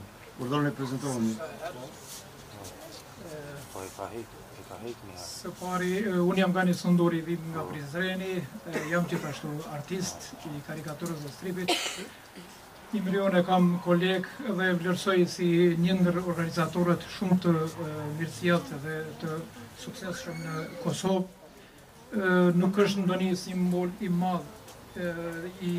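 No technical faults can be heard anywhere in the audio.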